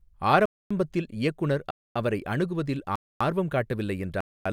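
Gaps between chunks cut the speech at 0.46, 1.71, 2.96 and 4.21 s, each a 250 ms silence after every 1.0 s of sound, the first just before "இயக்குனர் அவரை அணுகுவதில் ஆர்வம்". Unlike dropouts, nothing is missing; the sound is simply interrupted at each join.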